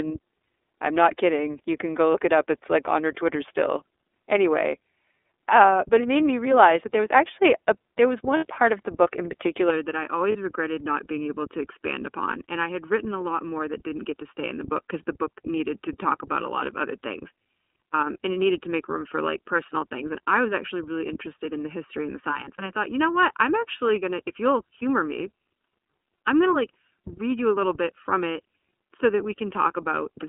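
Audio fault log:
throughout: iLBC codec, speech held to a roughly 300 Hz to 3.6 kHz band, 30 ms frames at 13.33 kbps, giving a plainly audible rough, synthetic edge.
8.37 s to 8.45 s and 10.32 s to 10.36 s: lost iLBC frames, 60 ms after "actually a there was" then 30 ms, each gap filled with a buzzy held repeated pitch cycle, recovering almost immediately.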